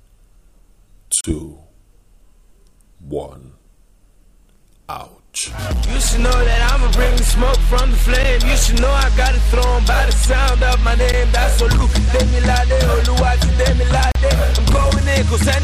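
Dropouts fall at 1.21 to 1.24 s, 8.23 s, 11.12 s and 14.12 to 14.15 s. Each is a block of digital silence: samples zeroed with no fade, likely because the output buffer went unfilled in time. The two 12 ms ticks fit a 512-sample buffer; the others are short holes of about 35 and 37 ms.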